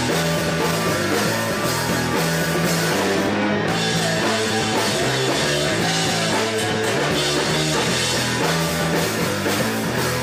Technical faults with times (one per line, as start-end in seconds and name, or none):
none